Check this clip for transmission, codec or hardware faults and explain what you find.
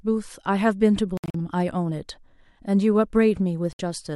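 Two Bluetooth dropouts interrupt the speech. From 1.17 to 1.35 s, about 128 ms of sound is missing in broken gaps, the longest 64 ms. A single 64 ms gap follows at 3.73 s. Audio packets likely arrived too late and were discarded. Sound cuts out abruptly, then resumes further on, as if it kept playing.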